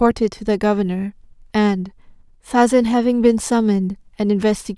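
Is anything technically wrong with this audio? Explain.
No, no technical faults heard.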